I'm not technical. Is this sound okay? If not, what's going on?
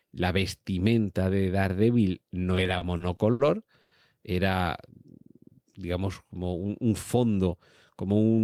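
No. Between 2.55 and 3.41 s the speech has repeated stalls (stutter): seven brief hitches, the longest 70 ms, where the audio arrived too slowly and the receiver stretched the last sound to cover. Nothing is lost, but about a fifth of that stretch is filler, so it drags.

At 3.81 to 3.93 s there is a call audio freeze lasting 100 ms. The sound hangs on a continued copy of the moment before, then resumes where it stopped, likely because data was held up in transit and the playback buffer ran dry.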